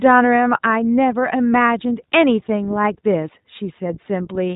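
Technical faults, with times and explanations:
Throughout, iLBC codec: the speech has no content above about 3.8 kHz and carries a plainly audible rough, slightly synthetic texture. Each 20 ms frame's excitation is coded on its own, without leaning on the frame before, so small discontinuities roughen the voice. That roughness is what sets it apart from simple band-limiting or a telephone-style G.711 path, which dull the sound without this grain. The texture fits iLBC's 15.2 kbps mode.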